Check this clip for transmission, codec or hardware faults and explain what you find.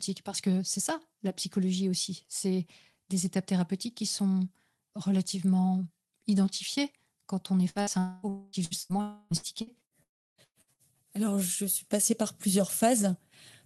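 Yes, there are transmission faults here, all clustered between about 7.7 and 10.8 s of this speech clip, where the connection breaks down in stages.

Burst of packet loss, at 7.69 to 7.78 s and 7.81 to 7.90 s, both just after "identifiées quand on est". Each time roughly 60 ms of audio never arrived, and the receiver filled the hole by extending the last sound while fading it down. What you hear is a brief held buzz or hiss, after which the speech resumes slightly further on with a short piece gone.

Long network dropouts, at 7.99 to 8.26 s, 8.29 to 8.56 s, 9.01 to 9.34 s and 10.03 to 10.41 s. These are longer gaps of about 240 to 360 ms, likely caused by stretches where no packets got through at all. In the first three the concealment stretches the last sound across the whole gap as a decaying tone. In the last one it gives up quickly and about 320 ms is left as silence before the audio returns.

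Repeated packet loss (robotic sound), from 8.65 to 10.82 s. Across this span there are eight separate holes, the longest about 117 ms, adding up to roughly a quarter of the stretch being patched rather than real audio. Because each patch of extended sound is followed soon by the next, the speech turns choppy, with fragments missing throughout.

The underlying Opus call path itself is running at 24 kbps with audio band-limited to 12 kHz.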